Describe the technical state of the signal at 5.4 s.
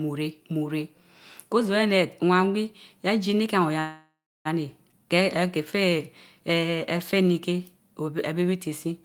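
Around 5.4 s the speech drags: from 4.99 to 5.97 s it plays at roughly 92% of normal speed with the pitch unchanged, so sounds stretch out. This is a jitter buffer slow-down. The receiver's buffer was short of audio, so it repeated individual pitch cycles and slivers of pause over and over, padding the stretch by 81 ms to rebuild its reserve before normal pacing resumed.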